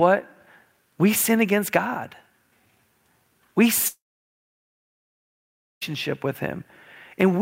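From 3.87 s to 5.83 s comes what is likely a long network dropout. The last sound smears into a brief fading buzz, then about 1.8 s of near silence follows, and the speech resumes with that stretch lost. Unlike a short concealed glitch, the gap is skipped rather than delayed.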